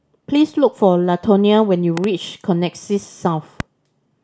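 A sudden voltage step, likely from a plug, switch or static discharge, breaks into the signal chain and is shaped by the circuits that follow. The result is a loud pop. Between 1.97 and 2.06 s two pops arrive in quick succession. A single pop follows from 3.60 to 3.62 s. Both peak about 10 dB above the speech, which continues underneath each sharp thump.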